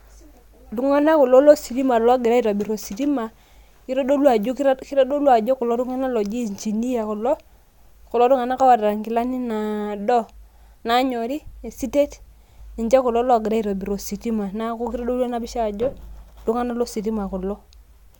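No technical faults can be heard anywhere in the recording.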